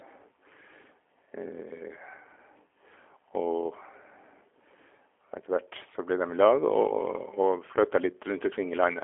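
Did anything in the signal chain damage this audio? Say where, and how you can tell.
Yes, at the codec stage, for the whole clip. The speech has a G.729 codec character: nothing above 3.7 kHz, a telephone-line band of 300 Hz to 3.4 kHz, and a plainly audible rough, slightly synthetic texture, which fits G.729A at 8 kbit/s. A plain band-limiting filter would only dull the sound. Here the speech is rebuilt from a vocal tract model and a sparse pulse excitation, and that gives the buzzy graininess.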